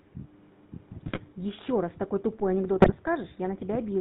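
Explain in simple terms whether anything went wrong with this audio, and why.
Several things went wrong. The whole clip went through the GSM full-rate codec. It cuts everything above 4 kHz and rebuilds the voice from pulses, so speech sounds buzzy and gravelly.

GSM bit errors hit from 1.06 to 1.2 s and again from 2.79 to 2.95 s. Corrupted data reached the decoder, so the speech briefly squawks and gargles.

At 2.40 s there is a DC step. The waveform's zero line suddenly shifts and stays shifted to the end, giving a single low thump.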